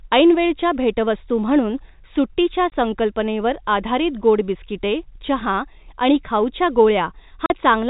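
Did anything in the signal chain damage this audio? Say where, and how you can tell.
Yes, at the network stage: packet loss filled with silence. A 20 ms hole at 2.70 to 2.72 s (between "ऐनवेळच्या भेटवस्तू म्हणून सुट्टीच्या" and "संकल्पनेवर आधारित गोड बिस्किटे") and a 40 ms hole at 7.46 to 7.50 s cut to dead silence with hard edges. Those lengths are one and two multiples of 20 ms, which points to whole lost packets rather than a buffer underrun or a fade-type dropout. No concealment fills the gaps. The band-limited telephone sound of the G.711 coding continues on both sides of each hole.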